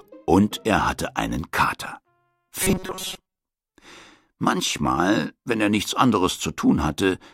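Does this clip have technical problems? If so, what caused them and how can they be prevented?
Yes. Robotic sound from repeated short buffers, 2.63 to 3.39 s: a 188 Hz metallic buzz, likely from about 5.3 ms fragments looping while most incoming audio is skipped. Larger buffering or a steadier delivery path would prevent it.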